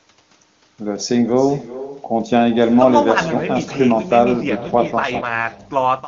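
From the start and through the whole clip there is echo with no canceller: every phrase is followed, after something like four tenths of a second, by a weaker copy about 16 dB down, thinner than the direct speech. That delay is the round trip of the far end's loudspeaker output being picked up by its microphone and sent back, with no echo canceller in the path to subtract it. The shadow sits under all of the speech.

From 4.48 s to 5.60 s there is an AMR rate drop. The AMR-WB stream, which runs at 23.85 kbit/s with little or no audible codec damage, steps down to 8.85 kbit/s, the behaviour of a network commanding a lower mode to free bits for error protection on a weak link. The audio bandwidth does not change and there is no dropout, but for that stretch the speech becomes rougher and more synthetic, then clears when the higher rate returns.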